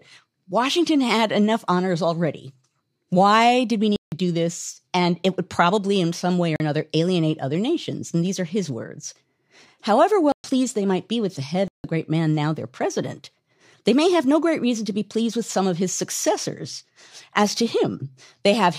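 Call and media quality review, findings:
Block of digital silence, four events: output buffer likely not filled in time, so samples dropped to zero. Hard cuts: 3.96–4.12 s between "did we" and "do this", 6.56–6.60 s after "in some way or", 10.32–10.44 s before "they might be with", 11.68–11.84 s.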